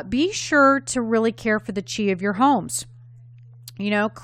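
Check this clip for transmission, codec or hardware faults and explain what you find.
No faults can be heard.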